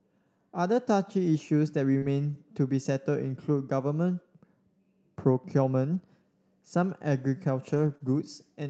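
The speech clip comes through an Opus call path at 32 kbps with audio up to 8 kHz, and it has two kinds of packet fault. Short concealed packet loss appears at 1.97 to 2.04 s, where about 40 ms went missing and roughly 44 ms was synthesised, and again at 7.98 to 8.02 s, with about 18 ms filled. At each point the decoder extended the last sound, so it is heard as a brief smear or wobble. Lost packets rebuilt from error correction sit at 2.02 to 2.04 s (20 ms, right as the first concealment hands back), 5.94 to 6.00 s (40 ms), 7.74 to 7.96 s (120 ms, which fits a run of six 20 ms packets) and 8.02 to 8.08 s (40 ms). There is no gap in those stretches, because the decoder played the low-bitrate copies carried in the following packets. The sound turns rougher and grainier instead. On a spectrogram the harmonic lines look less crisp, with more noise filling the space between them. The waveform stays continuous but looks coarser.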